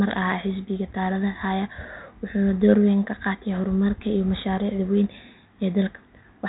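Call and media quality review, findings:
No faults found in this speech clip.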